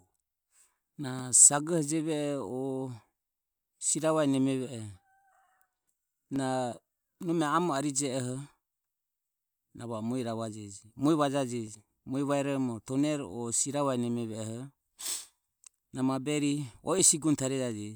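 Speech with clock drift buffer slips: regular clicks about every 2.66 s from 1.04 s to 16.99 s, likely from clocks roughly 300 ppm apart dropping or repeating around 30 samples, seen as evenly spaced thin vertical spectrogram lines and waveform jumps.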